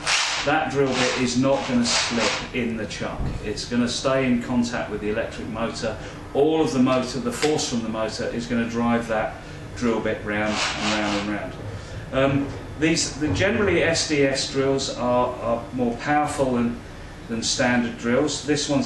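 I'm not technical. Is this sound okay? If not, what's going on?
Yes, there's nothing technically wrong with the sound anywhere in this recording.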